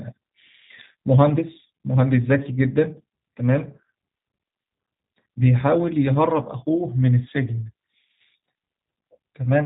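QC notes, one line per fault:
throughout — G.729 codec: the speech is band-limited with nothing above 4 kHz, and carries a plainly audible rough, synthetic quality, which fits G.729A at 8 kbit/s. The codec discards the waveform and rebuilds each 10 ms frame from a vocal tract filter, a pitch predictor and a sparse pulse excitation. That coarse, model-based rebuild strips natural texture from the voice and leaves a buzzy, artificial edge, while the words remain intelligible.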